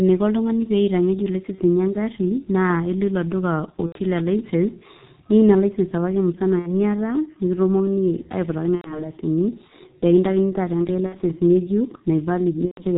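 The speech runs through a G.723.1 codec throughout, squeezed to a rate that fits its 6.3 kbit/s mode with 30 ms frames. Nothing above 4 kHz survives and the slow-updating voice model is heavily strained, so the voice sounds muffled and hoarse, with smeared consonants.

VoIP packet loss concealed by the speech codec strikes at 1.55, 3.86, 6.59, 8.76, 11.07 and 12.65 s. Gaps consistent with losing one to four 30 ms frames are filled by the decoder extending its last pitch and filter, producing a buzzy tone or coloured noise that fades. The longest disturbance is 8.76 to 9.09 s.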